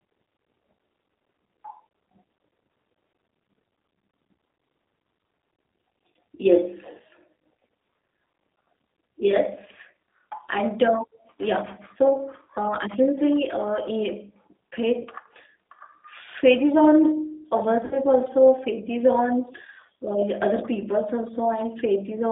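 Throughout, the speech carries G.729 codec damage. The band runs from 300 Hz to 3.7 kHz. The sound is plainly rough and synthetic, which fits an 8 kbit/s codec.

VoIP packet loss concealed by the speech codec occurs at 15.01–15.07 s, about 40 ms lost, and at 17.85–17.99 s, about 60 ms lost. The decoder stretches its last sound into a buzzy tone or a coloured noise that fades. Recovery is weak.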